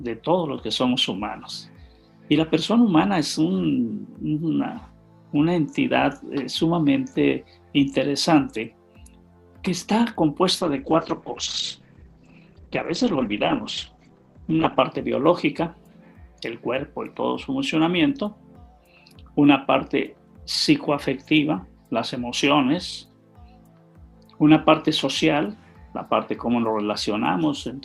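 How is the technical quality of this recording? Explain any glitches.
The recording has one clear glitch, a call bitrate drop from 10.61 to 14.86 s. Across that stretch the sound turns muffled, rough and watery, holding at its worst for about 4.2 s before recovering. The bandwidth estimate collapsed, so the Opus encoder was forced to spend far fewer bits, which fits a fall from around 96 kbps to roughly 13 kbps. With so few bits it codes more coarsely and narrows its bandwidth, cutting the top end from 20 kHz to 8 kHz.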